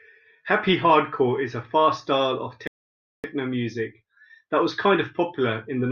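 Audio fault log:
2.67 to 3.24 s, rebuffering stall: the speech drops abruptly into silence for about 0.57 s, then picks up exactly where it broke off with nothing missing. The player exhausted its downloaded audio and paused until more data arrived, so time is inserted.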